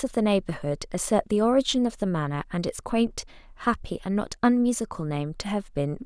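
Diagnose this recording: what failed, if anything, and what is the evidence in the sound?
Nothing failed: no stage of the chain leaves an audible fault in this speech recording. The sound offers no evidence of trouble in wiring, conversion, buffering, transmission, storage or playback.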